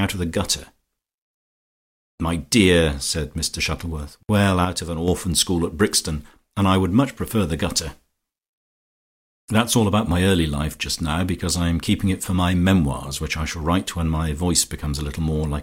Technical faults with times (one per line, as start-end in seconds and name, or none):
4.65-5.08 one channel drops out